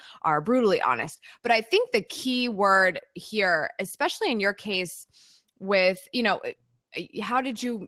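Opus voice compression affects the speech throughout, which fits a low rate of about 16 kbps. SILK's coarse linear-prediction excitation below 8 kHz leaves the speech hoarse and slightly robotic, with a CELT layer above, and plainly audible damage.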